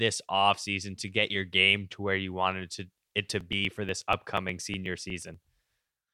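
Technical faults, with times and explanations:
3.28 to 6.07 s, periodic USB or driver dropouts: Right after "you wanted to it", the speech starts ticking every 0.121 s, about twenty times. Each time the bus or driver stalls, and a few milliseconds of audio are skipped. The abrupt joins click.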